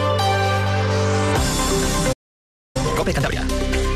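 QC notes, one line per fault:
2.12–2.77 s, playback stall. The sound cuts out mid-flow and the output goes fully silent for about 0.62 s. It then resumes rather than fading back in. A gap this long with a clean restart likely comes from the player running short of buffered data, or from its audio thread being held up, so nothing reached the output until it recovered. The silence is abrupt at both edges, which sets it apart from a deliberate pause.
2.77–3.39 s, time-compressed catch-up. Right after the silence the sound rushes forward at double speed. The pitch stays normal. To clear the backlog left by the stall, the player drops short slices of audio and cross-fades the remaining pieces together. Removing material this way shortens time without shifting pitch.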